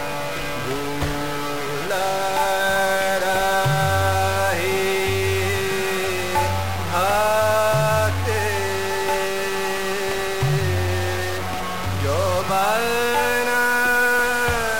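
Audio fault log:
throughout, stuck bit: one bit in the sample data is likely fixed at 0 or 1, as from a broken data line or converter fault, so about half of all sample values are shifted by that bit's weight, a step of roughly -25 dBFS, in a pattern that tracks the waveform. The result is a harsh, buzzy distortion, and because the bit toggles with the sign of small values, low-level stretches fill with noise at around that level.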